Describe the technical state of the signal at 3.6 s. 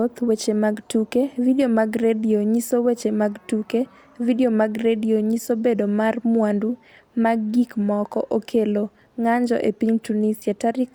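At 3.6 s the speech signal is intact, with no audible dropout, clipping, distortion or other fault at that point.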